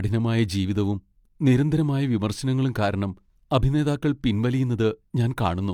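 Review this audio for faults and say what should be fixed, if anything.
Nothing stood out on listening to this speech recording, so there is nothing to fix.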